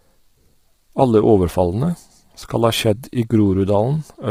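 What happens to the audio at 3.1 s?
Heavy low-delay AAC compression, likely AAC-ELD at a rate that fits roughly 24 kbps, affects 3.1 s as it does the whole clip. Its short frames resolve pitch harmonics poorly, so the speech sounds rough and grainy, with noise between harmonics and a dulled, synthetic-sounding top band.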